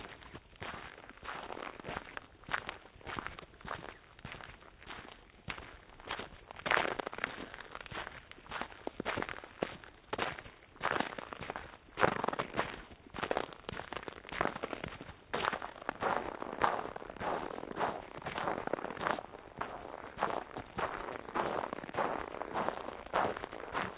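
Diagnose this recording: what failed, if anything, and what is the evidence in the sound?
Nothing in this recording of everyday sounds stood out on listening as a failure at any stage of the chain.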